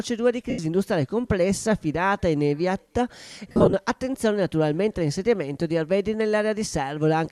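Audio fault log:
0.50–0.59 s and 3.49–3.74 s, lost LE Audio frames. The first dropout lasts 82.5 ms. The second loses 165 ms scattered over 240 ms, with runs up to about 50 ms. The decoder refills each gap from the last spectrum with random signs, so the sound smears into noise.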